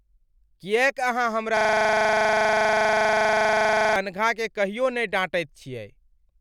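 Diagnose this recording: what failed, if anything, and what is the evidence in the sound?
A system hang loop at the driver or buffer stage runs from 1.57 to 3.96 s: one 40 ms slice of speech repeats exactly, about sixty times, as a steady 25 Hz buzz. Packet-loss concealment would fade or vary; this repeats identically, which fits a frozen ring buffer.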